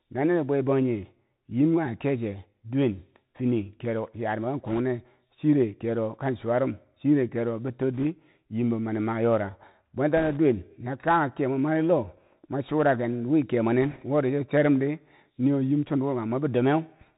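Bluetooth CVSD headset codec, throughout the speech: the band stops at about 4 kHz, and the plainly audible grainy hiss points to a 64 kbps CVSD stream, where each sample becomes a single up-or-down step whose size adapts as it goes. Sharp, loud high sounds climb faster than the step can follow, so they smear and distort, sibilants come out scratchy, and a fine granular noise sits under the speech.

Bit errors on a Bluetooth voice link occur in four short bursts, at 4.66 to 4.80 s just before "chire kero kan chuwa", 7.94 to 8.03 s between "rum chire kero betor" and "yam be mani mayora", 10.17 to 10.38 s, and 13.82 to 14.04 s between "mwei churaken wi kemwe" and "wori coche rom ri". Roughly 1.5 to 2 percent of bits flip, but because every CVSD bit nudges the signal only slightly and the mistakes fade out, there are no loud clicks, just a brief rushing crackle laid over the speech.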